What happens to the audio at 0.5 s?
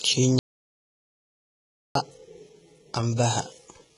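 At 0.5 s the speech has vanished into dead digital silence with no room tone, from 0.39 s to 1.95 s, about 1.56 s lost. This is an audio dropout to silence, likely the input cutting out while the recorder kept writing silence. Around the gap the treble sounds synthetic and gritty, with nothing above 11.1 kHz. That points to HE-AAC compression rebuilding the top by band replication at a heavy setting, which fits roughly 12 kbps.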